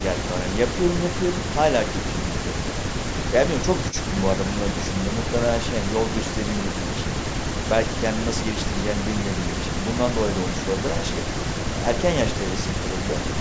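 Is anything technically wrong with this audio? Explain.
No, nothing is technically wrong with this speech recording. It has passed through a call's microphone processing, so there is no content above 8 kHz and the lowest bass is trimmed away, as that path normally does.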